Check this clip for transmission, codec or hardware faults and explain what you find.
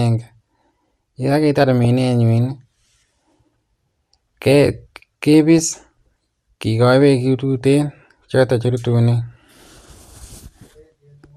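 There is one fault: DAB burbling at 1.84 s, 5.58 to 5.82 s and 7.61 to 7.87 s. Weak reception let bit errors through, so wrong samples get into single sub-bands. The speech gets short blips of noise.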